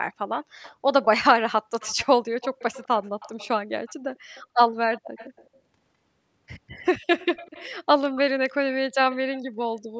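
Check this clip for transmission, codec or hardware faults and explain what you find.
An echo leak recurs through the speech, at 0.62–1.05 s, 1.80–2.06 s, 2.41–4.43 s, 4.94–5.49 s, 7.19–7.70 s and 9.12–9.40 s. Each time a faint copy of the voice trails it by 205 ms, about 20 to 25 dB below it. This is likely a far-end loudspeaker whose echo canceller let residue through. Room reverberation would be a smooth tail; this is a distinct, delayed repeat. The band stops at 8 kHz, as expected from call microphone processing.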